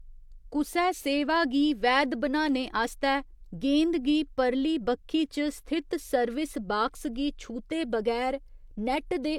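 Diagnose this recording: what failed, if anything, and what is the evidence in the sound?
Nothing in this speech recording points to a failure. No stage of the chain, from capture through to playback, leaves any audible mark on the sound.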